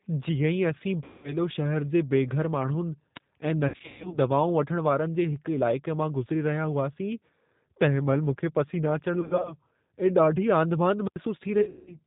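Speech carried through a G.729 codec, which sounds like an 8 kbit/s link: everything above 4 kHz is gone, and the voice is rebuilt from a filter, a pitch predictor and a few pulses per frame, leaving it plainly rough and synthetic throughout. VoIP packet loss concealed by the speech codec occurs at 1.04–1.37 s, 3.68–4.18 s, 9.21–9.54 s and 11.61–11.98 s. The decoder extrapolates from its last frame with falling gain, so the voice smears into a fading buzzy tone or coloured noise and stays weak after packets return. The first gap is a solid run of about 200 ms, and the others are scattered losses, the longest run about 180 ms near the end. Wireless microphone squelch dropout also occurs: a fading radio signal made the receiver mute its output, leaving a burst of hiss and then near silence of about 31 ms at 3.15–3.20 s and about 83 ms at 11.03–11.18 s.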